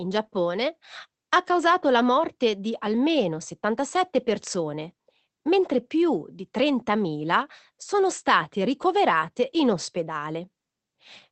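No faults are audible in this speech; the band stops at about 8 kHz, which fits its passage through a call codec.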